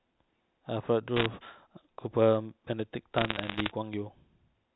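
Between 1.16 and 1.26 s, and again from 3.14 to 3.72 s, bit errors on a digital phone line flip individual G.711 samples, heard as sharp ticks and crackle over the speech. They show as isolated single-sample spikes in the waveform and thin vertical lines across the spectrogram's whole band.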